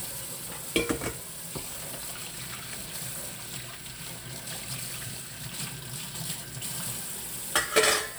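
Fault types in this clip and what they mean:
No faults turn up anywhere in this clip of sounds, so there's nothing to list here.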